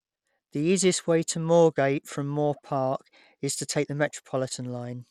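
A short speech clip with codec damage running the whole way through, and it's plainly audible: the top end thins out and flickers in and out, and there's a gritty, grainy layer riding on the voice with a bit of aliased hash in the treble. That's the signature of Bluetooth SBC compression, likely from a starved bit pool. At a rate that fits roughly 96 kbps, the upper sub-bands get almost no bits and the rest are quantised coarsely.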